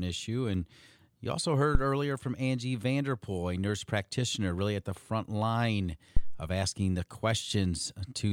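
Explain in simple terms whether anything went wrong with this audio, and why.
A phantom power thump, a deep low bump from microphone power switching on a live input, hits at 1.75 s after "you also" and 6.17 s after "at the front line". Unlike a breath pop, it doesn't follow the speaking.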